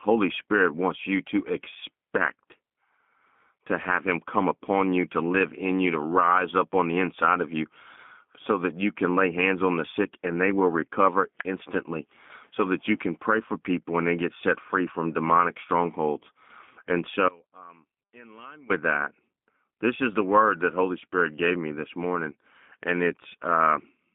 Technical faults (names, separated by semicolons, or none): G.729 codec; one channel inverted